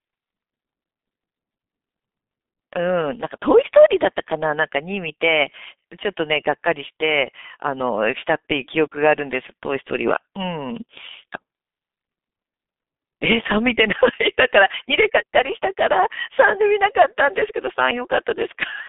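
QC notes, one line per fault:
Throughout, G.723.1 codec: the speech sounds muffled, hoarse and thin, with consonants smeared together and no content at all above about 3.7 kHz. The band runs from roughly 150 Hz to 3.6 kHz, as on an old phone line. The heavy roughness comes from a low-rate coder working in 30 ms frames, updating its model of the voice too slowly to track quick changes, which fits a bitrate around 6 kbit/s.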